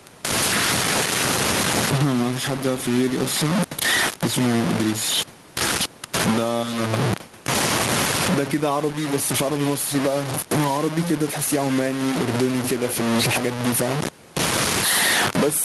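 From the first second to the end, the speech carries low bit depth without dither. The grain follows the speech and is almost as loud as it, so quiet syllables turn harsh and fragmented. This fits a signal likely truncated to about 4 bits with no dither.

Gain pumping runs through the whole clip as well. The gain ducks by around 15 dB under every loud syllable, which squashes the dynamics. The likely cause is input gain set far too high, with a fast limiter pulling it back. The room noise sits about 32 dB below the speech.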